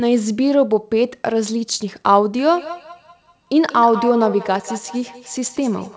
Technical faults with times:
2.46-5.96 feedback echo between two devices

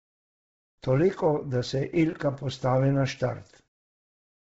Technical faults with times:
0.00-4.43 Bluetooth LC3 compression

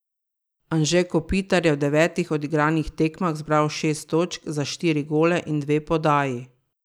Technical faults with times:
none

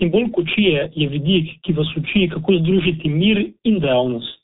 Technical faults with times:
0.00-4.43 G.723.1 codec

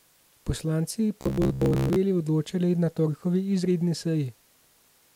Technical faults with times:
1.21-1.96 robotic sound from repeated short buffers

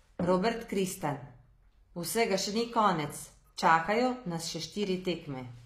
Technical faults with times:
0.00-5.66 HE-AAC compression
1.01 DC step

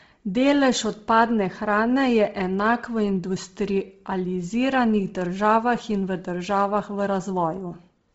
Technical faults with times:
0.00-8.14 Bluetooth LC3 compression

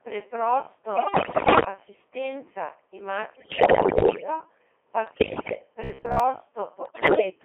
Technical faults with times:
0.00-7.44 Codec 2 vocoder
0.96-1.65 bit errors on digital voice radio
3.33-4.27 bit errors on digital voice radio
5.07-5.61 bit errors on digital voice radio
5.84-6.20 robotic sound from repeated short buffers
6.85-7.29 bit errors on digital voice radio

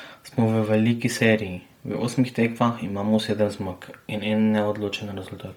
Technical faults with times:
0.00-5.57 Bluetooth LC3 compression

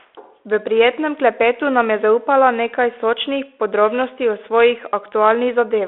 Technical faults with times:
none

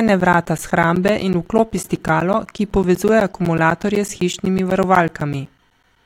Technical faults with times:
0.08-5.96 periodic USB or driver dropouts

